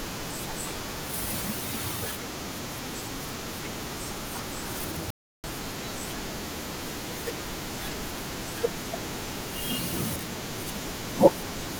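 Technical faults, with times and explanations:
5.10 to 5.44 s, audio dropout to silence: the speech cuts off abruptly and returns about 0.33 s later, with the gap holding digital silence and no room tone. The input was likely lost briefly while recording continued writing zeros, so that stretch of speech is missing.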